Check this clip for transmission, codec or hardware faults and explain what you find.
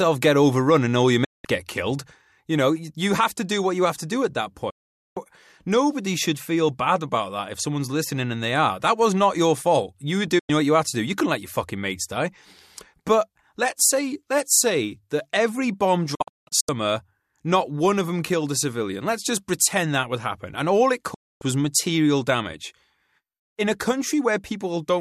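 Five digital broadcast dropouts break up the speech. They occur at 1.24 to 1.45 s after "overrun and all your", 4.70 to 5.17 s after "to do at that", 10.39 to 10.50 s before "what you had to", 16.15 to 16.69 s, and 21.14 to 21.42 s. The receiver lost valid frames and muted until clean ones returned. Each gap begins with a very fast fade of about 8 ms, then drops to silence, and the audio sent during the gap is gone. At 16.15 s the loss comes as several short holes over about half a second, the longest about 0.17 s.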